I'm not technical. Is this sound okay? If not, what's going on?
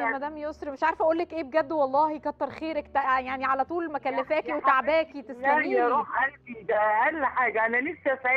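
Yes, it sounds fine.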